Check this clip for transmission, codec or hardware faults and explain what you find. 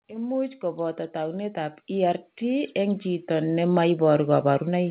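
One fault stands out: automatic gain rising. It runs from 0.08 s to the end at 4.90 s. The gain control judged the input too quiet and kept raising its gain. Speech and background noise swell together, so the noise floor climbs along with the voice. The missing content above 4 kHz comes from the G.711 mu-law call path and is not a fault.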